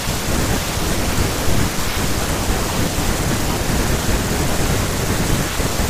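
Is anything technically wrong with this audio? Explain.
Yes. At 2.76 s there are lost LE Audio frames. A single frame, about 7.5 ms, went missing. The decoder filled the gap by repeating the previous spectrum with randomised signs. This leaves a brief, noisy smear in the speech rather than a clean click or dropout.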